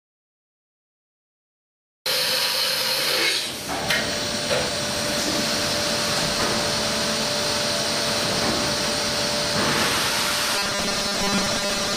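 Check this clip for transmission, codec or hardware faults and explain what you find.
One fault appears, at the end of the clip. From 10.55 s to 11.96 s there is robotic sound from repeated short buffers: new audio likely arrived too seldom, so about half the time was filled by replaying 5 ms segments. This imposes a rigid, metallic 200 Hz buzz that follows the original only loosely.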